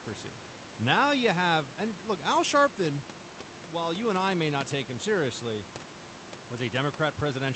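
No faults: room noise sits about 18 to 19 dB below the speech, and the Opus call path rolls off above 8 kHz, as that codec setting should.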